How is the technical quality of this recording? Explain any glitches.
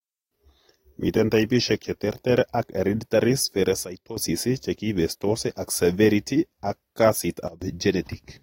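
The recording has two level faults. Both are a sudden gain jump in the speech: from 3.84 to 4.17 s the level falls by about 12 dB, and from 7.48 to 7.62 s by about 20 dB. Each likely comes from a gain change applied without a ramp. Speech and background noise step down together instantly and then snap back. A compressor or fade would glide instead.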